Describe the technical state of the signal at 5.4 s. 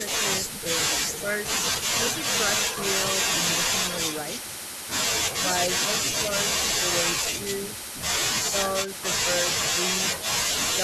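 At 5.40 s the speech dips for about 70 ms, through to 5.47 s, falling by something like 10 dB at its deepest. That's speech suppressed in double talk, most likely: with both ends talking at once, the echo canceller couldn't tell this talker apart from the loudspeaker echo it was trying to remove, so it pulled everything down together. You hear it as a brief dip in the speech.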